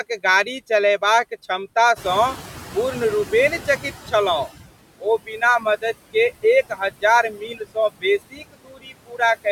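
Noise suppressor artifacts run through the whole clip: about 17 dB of steady-noise reduction pulls the noise down between the words and lets it rise under them, unlike a plain hiss. When the room noise jumps by about 13 dB near 2 s, the noise suppressor is catching up from 1.96 to 4.57 s. The louder background passes through with less reduction at first, then settles over roughly 2.6 s to about 15 dB lower as the estimate adapts. It is a slow fade rather than a sudden cut. Speech is cut by the noise suppressor at 5.26–5.42, 6.69–6.81, 7.23–7.77 and 8.30–9.21 s. Parts of the speech are mistaken for noise and pulled down by about 14 to 21 dB, worst in the last stretch. These are brief swallowed dips inside the speech itself, not changes in the background.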